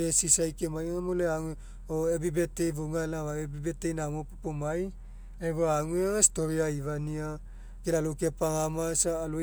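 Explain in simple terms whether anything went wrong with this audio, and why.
Listening to the speech closely, nothing stood out as having gone wrong at any point.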